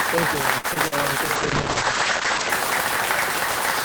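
A short recording of everyday sounds with a noisy distortion running the whole way through it, including a hiss that doesn't go away in the quiet moments. That's the signature of a stuck bit: one bit pinned high or low in the data path, so about half the samples land off by that bit's weight. Small values flipping sign around zero is what keeps the gaps noisy. A broken line or converter is the likely culprit. Early on there's a short stall from a late packet between 0.58 and 0.66 s. The sound just hangs there for about 57 ms while the jitter buffer sits empty, then carries on from where it stopped. Nothing is actually lost, but everything after it runs about 57 ms later than it should. Right after that come two short concealed packet losses, at 0.74 to 0.78 s and 0.88 to 0.94 s, where roughly 20 ms and then 40 ms never made it to the decoder. The receiver papered over the holes by extending the preceding sound, which you hear as a quick smear or wobble each time. 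Then from 1.36 to 2.56 s there's a call bitrate drop. The encoder went from 32 kbps down to 10 kbps, and for about a second at the bottom the bandwidth shrank from 20 kHz to 8 kHz. So the top end goes dull and the texture turns rough and watery until the bitrate picks back up.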